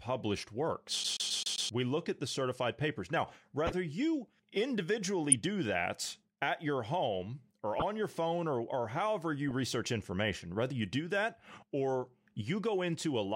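A CD stuck on one turn disrupts this speech recording from 1.04 to 1.69 s. The same 131 ms slice of sound plays five times in a row, each pass cut off by a brief mute as the laser jumps back a track. A scratch sends the pickup back to the same point on every rotation, which produces a fast, even, mechanical stutter. Later, a corrupt frame decoded appears four times, at 3.67 to 3.73 s, 5.31 to 5.33 s, 7.80 to 7.82 s and 9.49 to 9.51 s, with each hit spanning only a few compressed frames. Flipped bits in those frames were played rather than concealed, so misread codes and gains scatter energy into the wrong frequency bands. Each one is a short squeaky blip or burst of noise lasting roughly 20 to 60 ms.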